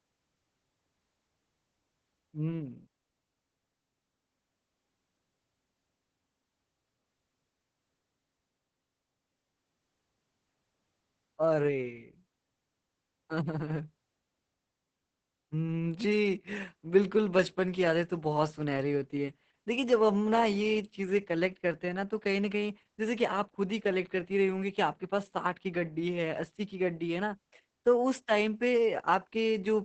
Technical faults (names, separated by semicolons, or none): Opus voice compression